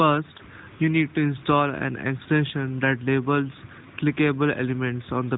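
Radio errors corrupted single AMR speech frames, each about 20 ms of audio, so the decoder filled the gap by repeating the previous good pitch and vocal tract settings at reduced gain. This is lost AMR speech frames, heard as a brief dip or warble from 0.38 to 0.42 s, just before "you need to install", and from 2.18 to 2.22 s, between "need to install an" and "that labels". The narrowband codec's light, band-limited sound fits AMR-NB's 12.2 kbps mode.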